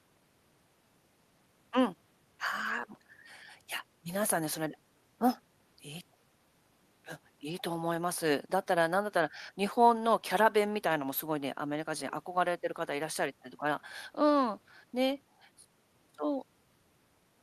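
Nothing to flag on the speech recording: no dropouts, glitches or level problems turn up anywhere in it.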